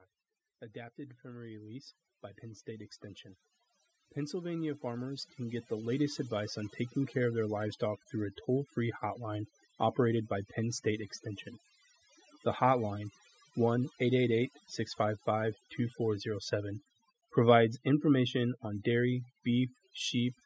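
Right from the start there's overdone noise removal running through the whole speech clip. The denoiser was pushed too hard, so any frequency band it judged to sit near the noise level got pulled way down or switched off, and the quieter parts of the voice got dragged under with it. You hear the background collapse into near silence with little twinkling specks.

Then there's automatic gain rising, twice. From 0.72 to 3.05 s the level creeps up by about 7 dB, and from 4.14 to 7.26 s it climbs again, this time by about 12 dB. In both cases the gain control decided the input was too quiet and wound itself up gradually, so the voice and whatever background survives the denoiser swell together over a couple of seconds, not jumping. The second rise is the bigger one. Nothing reaches past 8 kHz, which is just the call's microphone processing.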